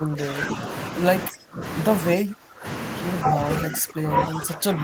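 Speech here, and it keeps getting pushed down: dips at 0–0.65 s, 1.28–1.63 s, 2.13–2.66 s, 3.3–3.4 s and 3.6–4.83 s, up to around 20 dB deep. That's likely speech suppressed in double talk, with the echo canceller ducking the talker while the far end speaks.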